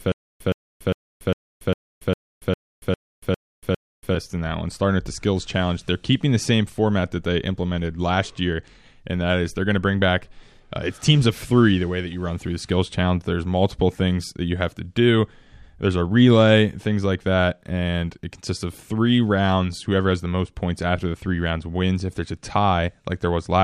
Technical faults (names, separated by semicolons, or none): stutter with silent gaps